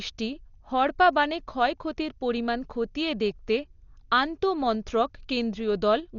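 Throughout, the speech sounds dull and muffled, with nothing above 7 kHz and a rough, fluttering noise hanging around tones. This is likely heavy Dolby Digital compression at a bitrate near 40 kbps, where the band is narrowed and starved frequency lines are filled with noise.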